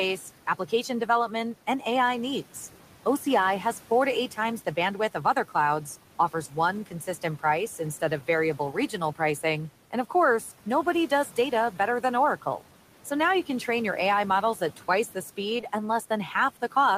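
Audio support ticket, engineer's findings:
Noise suppressor artifacts throughout. Background pulled down about 12 dB, pumping between phrases. The suppressor is treating steady room noise, about 19 dB below speech, as removable.

Speech cut by the noise suppressor, 6.86 to 7.4 s, just before "price instead". Roughly a tenth of a second of soft speech is ducked up to about 11 dB, so it sounds swallowed. The suppressor misclassified low-level speech as noise.

Short concealed packet loss, two back-to-back gaps at 15.57 and 15.61 s. Each gap is 20 ms of missing audio, with 12 ms and 19 ms concealed. Brief smear from the decoder's loss concealment extrapolating the previous sound.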